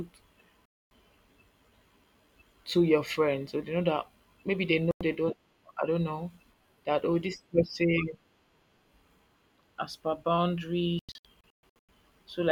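Digital broadcast dropouts mute the speech three times: 0.66 to 0.92 s, after "know that maybe they" at 4.91 to 5.01 s, and 10.99 to 11.89 s as scattered holes of up to 128 ms. Failed frames silenced the receiver, leaving flat-line waveform gaps and blank spectrogram columns.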